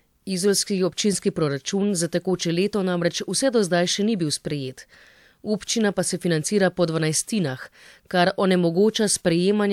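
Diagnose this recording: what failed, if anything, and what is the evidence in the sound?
Nothing failed: the recording contains no audible fault, so there is no evidence of a failure in the sound.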